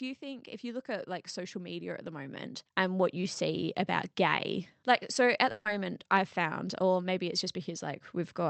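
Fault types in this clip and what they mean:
Automatic gain rising: the AGC decided the input was too quiet and kept nudging its gain up, so the speech and the background swell together by about 13 dB from 0.19 to 3.69 s, levelling off just before "about gay like so".
Burst of packet loss: at 5.51 to 5.67 s, right after "gay like so at", about 140 ms of audio never made it. The receiver covered the gap by stretching and fading the last sound, then picked up again at "I've found or maybe" with that stretch missing.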